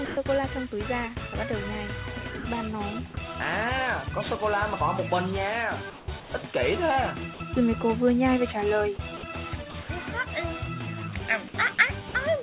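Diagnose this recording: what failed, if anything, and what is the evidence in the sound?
Brief stretches of sound give way to steady hiss at 0.05–0.17 s, 2.39–2.45 s, 6.2–6.32 s and 7.34–7.4 s. This is sound dropped by the voice detector, likely in the sender's call processing, which treated real sound as background.

From 5.9 to 6.32 s the natural background turns into flat, featureless noise. This is comfort noise in place of the background, likely synthesised by the receiver while transmission paused.

At 9.17–9.89 s and 11.75–12.14 s the sound turns choppy. This is sound chopped by the voice detector, likely switching repeatedly between sending and silence, within a call path band-limited to 4 kHz.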